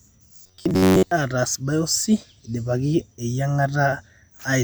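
Audio delivery in this speech recording stalled from 0.34 to 1.11 s. The likely cause is that fresh samples arrived too slowly and the playback side kept looping a short buffer of roughly 10.7 ms in place of the missing material, through most of that stretch. The result is robotic sound from repeated short buffers: the loop imposes a fixed buzz near 94 Hz, so the voice turns rigid and metallic while only loosely tracking the speech.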